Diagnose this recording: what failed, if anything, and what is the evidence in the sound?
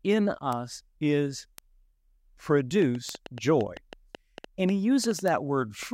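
Bit error spikes at the storage or digital link: single flipped bits at 0.53, 1.58, 3.09 (two samples) and 5.28 s jump to about -13 dBFS, giving isolated broadband ticks.

A train of clicks from 2.82 to 5.84 s, likely interference in the analogue wiring or a struggling interface, injects about fifteen irregular pops, roughly 5 per second, standing above the speech.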